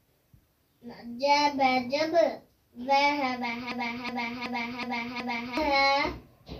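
At 3.72 s a system hang loop begins and runs to 5.57 s: the same 372 ms chunk of sound repeats five times at about 2.7 Hz, like a skipping record. That fits a 16384-sample ring buffer replaying while the system froze, and about two seconds of audio are lost.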